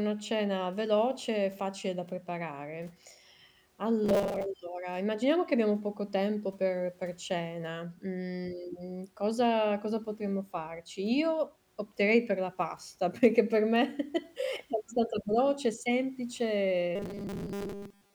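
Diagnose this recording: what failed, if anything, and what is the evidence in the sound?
Robotic sound from repeated short buffers at 4.04–4.46 s (before "allora immaginiamo che abbiamo") and 16.96–18.14 s: a rigid 200 Hz buzz, likely buffer underruns looping 5 ms blocks.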